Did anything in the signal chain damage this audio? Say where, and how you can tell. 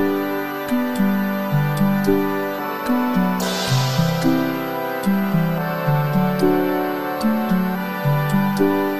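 Yes. A faint high whistle drifts between about 12.2 and 12.4 kHz throughout, well below the main sound: switching supply whistle, a power supply's burst-mode noise leaking into the analogue stage.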